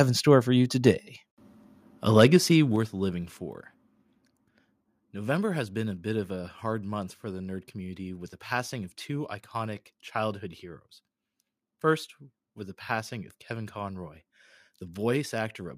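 Microphone volume stepped down at 1.02 s, just after "in store for you", and again at 2.76 s, just before "living for". In this speech clip the voice and the background drop together in a single instant, by about 3 dB the first time and about 4 dB the second. That suggests the input level was pulled down at the device rather than faded, likely the call software reacting to a signal it judged too hot.

Microphone overload runs from 2.17 to 2.24 s. The loudest part of the speech there goes about 3 dB past the converter's limit, and a small share of the samples are flattened at the converter's ceiling, which gives those peaks a harsh, crackling edge. The likely cause is an input volume set too high. The second level drop follows about half a second later, consistent with software responding to that distortion.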